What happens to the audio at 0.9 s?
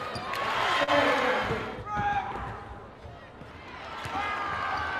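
A late packet emptied the jitter buffer, causing a short stall from a late packet at 0.83–0.90 s: the receiver held the last sound for about 42 ms, then resumed without losing anything.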